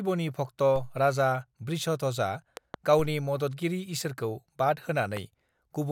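At 0.76 s, just before "राजा वृषध्वजआ", a DC step shifts the waveform's zero line by about -29 dBFS. The jump is heard as a brief low thump while the speech continues unchanged. The offset does not hold but drains away slowly, as it would through a high-pass stage with a corner near 2 Hz.

From 2.57 to 2.76 s, after "राजा वृषध्वजआ", a loud pop arrives as two sharp pulses in quick succession, peaking roughly 10 dB above the speech, which carries on underneath. The cause is likely a sudden voltage transient from a plug, switch contact or static discharge entering the signal path.

At 2.99 s, right before "मददगिरि ईसोरखौ", a second DC step of about -29 dBFS produces another low thump, again settling back with the same slow, roughly 2 Hz decay.

At 5.17 to 5.19 s a single loud pop, roughly 10 dB above the speech, cuts through as one sharp click-thump, likely another electrical transient of the same kind.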